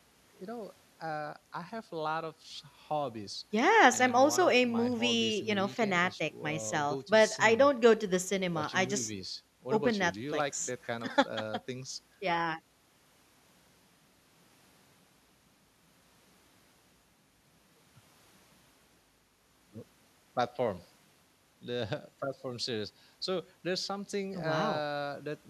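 No technical faults can be heard anywhere in this speech recording. There is no moment in it that calls for a time marker or a measured value.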